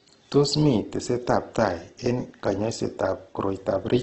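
Right through the clip the speech comes across grainy and rough, with nothing above 8.3 kHz. That's likely Opus compression, music mode, starved at something near 12 kbps, so bands get filled with folded or noisy content rather than left empty.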